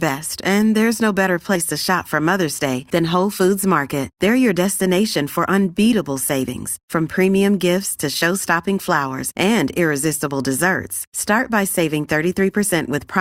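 Compressed frames skipped at 1.55 s, between "and there's no better" and "to shop for": the speech jumps forward by around 40 ms, which fits about two lost 20 ms frames.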